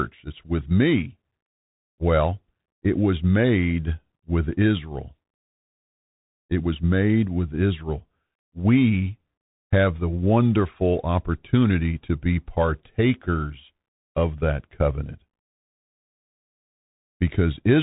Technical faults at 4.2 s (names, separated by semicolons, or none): Bluetooth CVSD headset codec